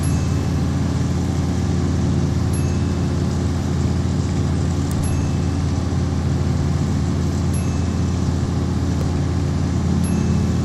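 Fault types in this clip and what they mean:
Electrical switching spike: two sharp snaps at 4.91 and 9.01 s, likely nearby switch arcing; needle-thin waveform spikes, thin full-height vertical lines on the spectrogram.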